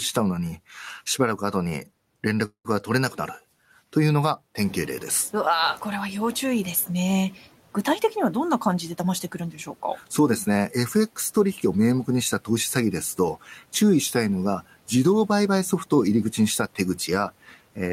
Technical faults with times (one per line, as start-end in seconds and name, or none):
2.45-2.74 call audio freeze
4.59-6.87 noise suppressor catching up
8.73-9.43 jitter buffer speed-up
15.21-16.75 jitter buffer speed-up